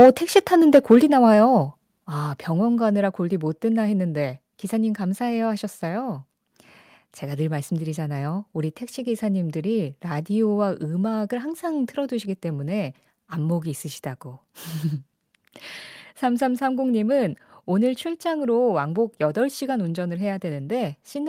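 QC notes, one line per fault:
0.00–0.10 s and 0.74–0.95 s, microphone overload: the loudest peaks of the speech break up with a harsh, crackling edge, most densely in the first tenth of a second, where roughly a fifth of the samples were cut flat at the converter's limit. In the second burst the share is nearer 7 percent. The likely cause is input driven about 4 dB past full scale, so the converter shaves off the tops. The waveform shows squared-off, flat-topped peaks, and the spectrogram shows broadband vertical smearing at those instants.
1.02 s and 2.04 s, microphone volume stepped down: the whole signal, speech and background alike, drops about 4 dB at once at each point, with no fade. The first drop comes shortly after the overloaded passage, which fits an automatic input-gain reduction that likely kicked in after the clipping and then stepped down a second time. The waveform envelope shrinks abruptly at each time, and the spectrogram dims evenly across all frequencies from there on.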